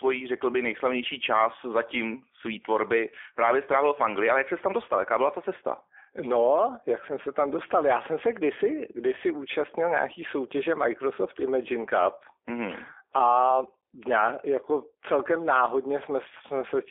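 Throughout, G.729 coding limits the speech to roughly 300 Hz to 3.5 kHz. Its pulse-built, synthetic roughness, unlike plain telephone band-limiting, points to an 8 kbit/s G.729A link.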